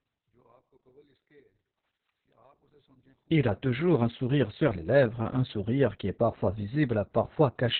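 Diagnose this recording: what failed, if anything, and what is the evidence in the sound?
The codec stage failed: Opus voice compression running in SILK mode at narrowband, with heavy damage that points to a very low bitrate, around 6 kbps. Nothing above 4.4 kHz survives for the whole clip, so the speech sounds muffled, while coarse excitation coding makes it hoarse and slightly robotic.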